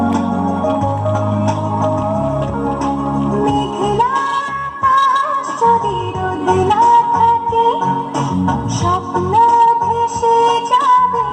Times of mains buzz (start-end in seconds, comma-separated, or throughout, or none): none